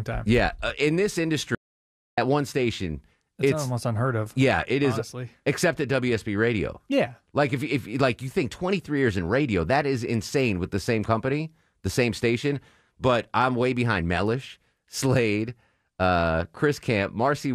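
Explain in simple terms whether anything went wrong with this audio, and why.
Yes, something went wrong. The audio input was likely lost for a moment, while the recording kept going and stored pure silence. This is an audio dropout to silence: right after "uh in this", the sound cuts to dead quiet from 1.55 to 2.18 seconds, about 0.63 seconds, then resumes with "one station it's it's". Whatever was said in that gap is gone.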